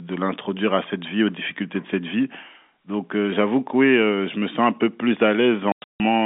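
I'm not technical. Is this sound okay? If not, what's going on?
No. Near the end, from 5.72 to 6.0 s, the speech is chopped into hard-edged gaps of dead silence. This is packet loss filled with silence: chunks of the call never arrived, and the longest hole is about 160 ms. Unlike a smoothed-over dropout, nothing is patched in.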